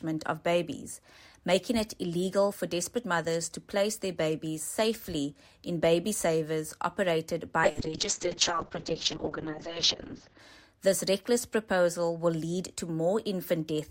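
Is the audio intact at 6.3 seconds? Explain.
Yes, at 6.3 seconds the audio plays through intact, with no dropout, click, distortion or other fault at that moment.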